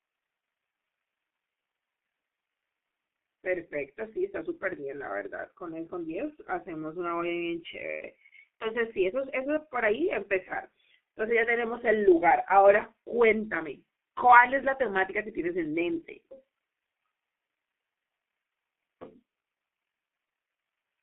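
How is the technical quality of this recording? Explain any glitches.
Technical quality is poor: the speech runs through a heavily damaging low-rate telephone codec for the whole clip, with two brief dropouts on top.

G.723.1 codec, throughout: the audio is confined to a narrow line band of roughly 200 Hz to 3.5 kHz and coded in coarse 30 ms frames, with a slowly updated vocal model. The sound fits a bitrate of about 6 kbit/s. The result is a muffled, hoarse voice with heavy codec damage. Consonants are smeared and there is no brightness above the band edge.

VoIP packet loss concealed by the speech codec, at 8.59 to 8.66 s and 19.40 to 19.43 s: each gap fits a single lost 30 ms frame. The decoder filled it by extending the previous pitch and filter while pulling the level down. This produces a short buzzy or tonal smear in place of the real sound. Because each frame builds on the one before, the voice stays weak or distorted for a moment after each gap.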